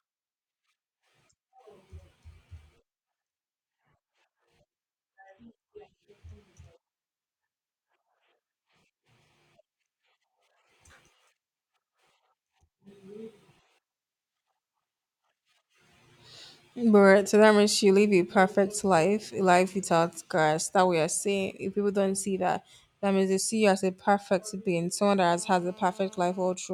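A steady, raspy 217 Hz buzz, about 28 dB down, runs from 25.31 to 26.55 s. This GSM phone buzz comes from a nearby handset's call bursts being rectified.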